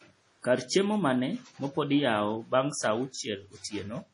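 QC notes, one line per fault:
Throughout, MP3 compression: the speech stops dead at 10.6 kHz with nothing above it, and the damage is heavy. It has a watery, swirly quality, with metallic chirps on the s sounds as weak frequency lines flicker in and out from frame to frame, and attacks come out smeared. That all points to a likely MP3 encode starved of bits, which fits a very low rate around 32 kbps.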